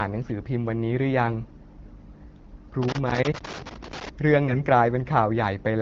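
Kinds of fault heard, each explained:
Loose connector crackle: a worn or dirty contact making and breaking as it moves, chopping the signal and adding pops from any DC on the line. From 2.83 to 4.09 s an irregular, scratchy crackle sits on the speech.
AMR bit errors: flipped low-priority bits in the AMR-WB frames, running at 12.65 kbit/s, misplace the excitation pulses and skew gain and spectral values. From 4.48 to 4.63 s the speech keeps its pitch and level but turns hoarse and gargly, a span that fits about seven 20 ms frames, unlike a contact fault's clicky bursts.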